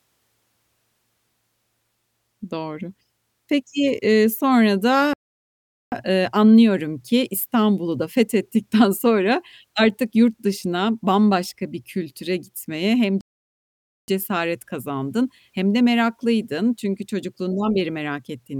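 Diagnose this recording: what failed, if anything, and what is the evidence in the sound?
The failure is at the playback stage: a playback stall, occurring twice. The speech stops abruptly in mid-flow at 5.13 s and stays silent for about 0.79 s, until 5.92 s. It happens again at 13.21 s, with a gap of about 0.87 s ending at 14.08 s. Both cut-outs are silences. The likely cause is the player running dry of buffered data, or its output thread being blocked, so nothing reached the output until it recovered.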